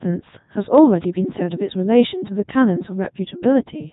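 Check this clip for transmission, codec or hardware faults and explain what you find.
The speech carries one fault, present throughout: a Codec 2 vocoder. Nothing of the waveform survives; the decoder rebuilds the voice from sine waves driven by pitch, voicing, energy and a coarse spectral envelope, with a rate that fits its 3.2 kbit/s mode. The result is heavily robotic and buzzy. A spectrogram shows neat synthetic harmonic stripes and nothing above 3.8 kHz, and the waveform looks smoothed and regular, unlike natural speech.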